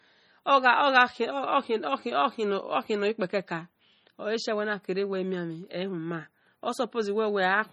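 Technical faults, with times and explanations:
Throughout, likely MP3 compression: heavy watery, swirly smearing as weak frequency lines flicker on and off between frames, fitting a starved 32 kbps bitrate; nothing above 20.9 kHz.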